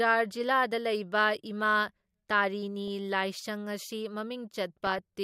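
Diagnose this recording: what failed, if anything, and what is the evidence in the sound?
The failure is in the broadcast codec stage: DAB burbling, where residual bit errors from weak reception slip past error correction into the MP2 data. At 2.88 s there is a brief burble, and from 4.77 to 4.99 s a longer burbling patch over the speech. Each points to corrupted frames at a bit error rate of a fraction of a percent. Corrupted sub-band samples put short noise blips in single bands, and corrupted scale factors make bands jump in level for up to a frame. Packet-loss concealment would instead leave gaps or smeared repeats, not this burbling.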